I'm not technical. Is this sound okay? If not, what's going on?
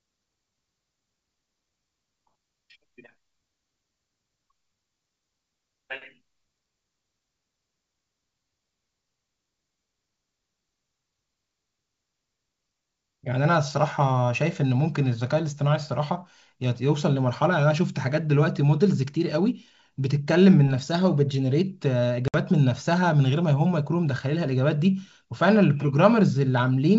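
No. At about 22.28 to 22.36 seconds there is packet loss on an ADPCM call. A few data packets never arrived, leaving a sudden gap of roughly 60 milliseconds. The receiving end lost track of the sound's pattern, so the speech comes back slightly rough before it recovers.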